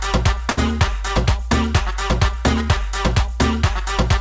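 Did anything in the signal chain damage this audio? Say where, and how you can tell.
Yes. A short stall from a late packet sits at the network and jitter-buffer stage, between 0.50 and 0.73 s. One packet arrived late, the buffer ran dry, and the receiver stretched the last sound for about 72 ms until the packet arrived. You hear a sound held too long. It differs from true packet loss because nothing is skipped afterwards. Playback resumes exactly where it paused, just 72 ms later, with the band still ending at 8 kHz from the G.722 call path.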